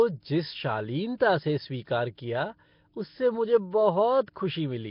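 Speech, with Nellymoser compression damage running through the whole clip. Nothing is heard above 5.3 kHz. The voice has a rough, hissy halo and a smeared, underwater quality, with noise standing in for weak bands. The cause is likely a low-rate Nellymoser Asao encode, near 22 kbps.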